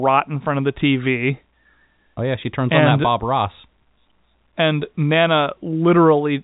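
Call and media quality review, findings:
No faults found; telephone-band speech, nothing above 3.8 kHz.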